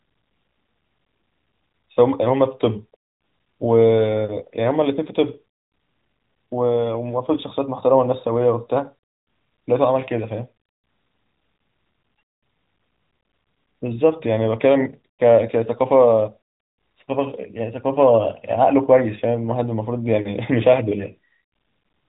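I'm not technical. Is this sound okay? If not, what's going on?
Yes, it's fine; the speech has the slightly narrow, muffled sound of an ordinary mobile phone call, because the phone's speech coding cuts everything above about 3.8 kHz, and that's just how calls sound.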